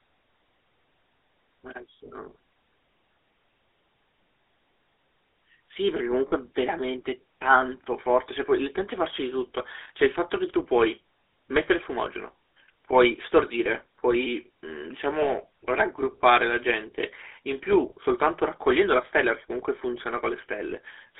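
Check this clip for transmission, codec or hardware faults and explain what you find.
Two faults are present: GSM full-rate coding across the whole clip, plus four short dropouts concealed by the decoder.

GSM full-rate codec: throughout, the speech is squeezed into a band of roughly 300 Hz to 3.6 kHz, consistent with 13 kbps full-rate GSM. Its pulse-driven vocal-tract model leaves a plainly audible buzzy, gravelly roughness. A spectrogram shows nothing above 3.6 kHz and coarse, smeared harmonics.

Lost GSM frames: at 6.28–6.33 s, 9.84–9.89 s, 15.20–15.43 s and 20.70–20.73 s, the decoder repeats the last good frame's parameters. Each gap sounds like a brief rough, metallic ring, visible as a flat smear breaking the speech pattern.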